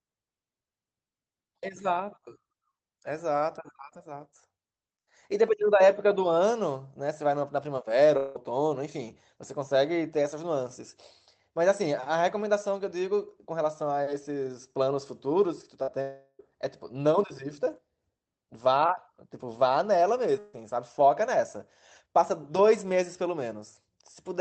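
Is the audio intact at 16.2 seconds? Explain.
No. Around 16.2 seconds the stream most likely suffered a long network dropout: from 16.01 to 16.41 s no audio reached the receiver, and roughly 0.38 s of the original is gone for good. The receiver covered the gap by stretching the last sound it had into a buzzy, hissy tail that fades across nearly the whole gap, leaving about 30 ms of silence before the audio resumes, already past the lost stretch.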